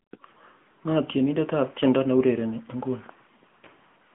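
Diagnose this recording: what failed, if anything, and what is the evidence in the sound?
The fault is at the codec stage: the speech has passed through the AMR narrowband mobile codec, and it is audible from start to finish. Nothing reaches above 3.8 kHz. The usable band sits at about 150 Hz to 3.4 kHz, like a phone line. The codec damage is plain. The codec rebuilds speech from a vocal-tract model and sparse pulses, so detail is lost. The degree of damage fits a higher-rate mode of about 10.2 kbps.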